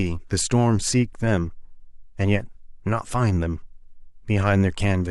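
No faults are audible anywhere in the speech.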